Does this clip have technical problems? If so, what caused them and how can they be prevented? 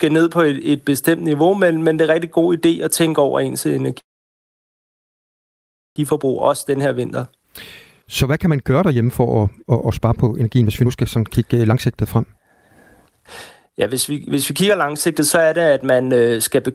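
Yes. A call audio freeze runs from 3.99 to 5.98 s, right after "at tænke over ens". The speech stops, a brief fading remnant gives way to nearly 1.93 s of silence, and then the speech resumes where it left off. Nothing is lost, but almost 2 s of delay is inserted. The likely cause is packets stalling in transit until the jitter buffer ran dry. A steadier network path, with QoS priority for voice traffic, would prevent it.

Jitter buffer speed-up follows at 6.12 to 7.44 s (108%), 8.02 to 12.48 s (131%), 13.09 to 13.24 s (165%) and 13.66 to 16.58 s (110%). The receiver drained the backlog from the freeze by cutting pitch-period-sized slices, roughly 1.5 s in the longest stretch. This makes the speech sound rushed while the pitch stays the same. Limiting how fast the buffer shrinks, or spreading the catch-up over a longer span, would keep the speech from sounding hurried.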